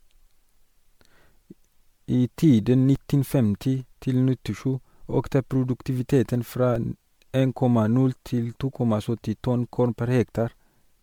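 From the start, the speech has a swirly, hollow, smeared quality with blurred consonant attacks, more than a single MP3 pass near 96 kbit/s would cause. This is likely generation loss from about four re-encodings, each on a shifted frame grid, so the artefacts stack up.

At 2.96 s and again at 6.76 s, a DC step shifts the waveform's zero line abruptly. Each is heard as a brief low thump. The offset then drains away as a 20 Hz high-pass would, and the speech continues unchanged, unlike a dropout.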